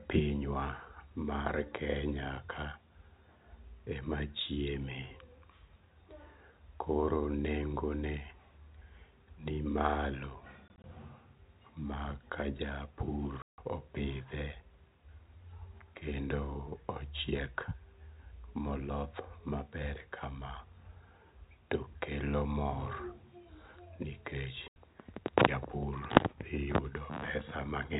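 From 10.68 to 10.84 s the speech stutters with gaps, about 60 ms missing in runs no longer than 20 ms. At 13.42 s a solid 160 ms hole cuts in, and at 24.68 s an 80 ms one. This is packet loss filled with silence: the receiver played nothing where lost packets should be, leaving hard-edged holes. The gap sizes fit 20 ms packets. The G.711 telephone coding carrying the call adds only faint noise of its own.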